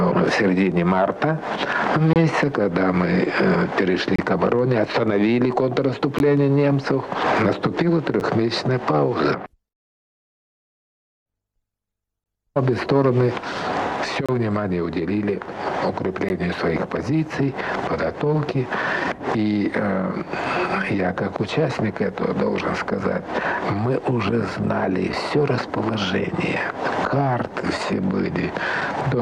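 Short, hard-edged dropouts to silence break the sound at 2.13–2.16 s, 4.16–4.19 s, 6.19 s, 8.20 s, 12.24–12.26 s, 14.26–14.29 s and 16.29 s. Each lasts 9 to 27 ms, and they fall on a 2 s spacing. This is a gap between stream segments: neighbouring 2 s segments are timestamped slightly apart, so the player inserts silence at the seam. All the audio is still there, just pushed later.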